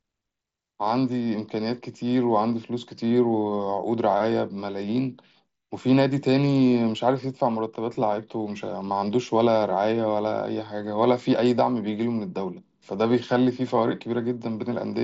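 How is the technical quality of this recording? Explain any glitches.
Nothing stood out as a glitch on listening to this speech recording, which comes over what sounds like a Bluetooth mSBC headset link with no content above about 7.7 kHz.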